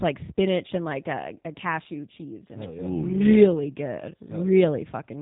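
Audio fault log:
Throughout, G.729 codec: the speech comes through intelligible but plainly rough and synthetic. It is rebuilt from a vocal tract filter, pitch predictor and a few pulses per 5 ms subframe, which fits an 8 kbit/s G.729A stream. Nothing above 3.8 kHz survives.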